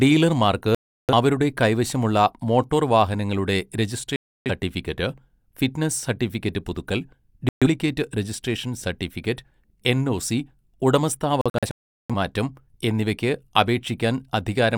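The speech is hit by digital broadcast dropouts four times: at 0.75 to 1.13 s, 4.16 to 4.51 s, 7.49 to 7.67 s, and 11.41 to 12.14 s. Each time the receiver stops getting usable frames and mutes, so the sound cuts to silence and resumes later, with the missing audio simply gone. The gaps last about 340, 300 and 130 ms. All of them are multiples of roughly 43 ms, which fits whole frames being discarded. The last event breaks into several short holes totalling about 510 ms, the longest about 380 ms.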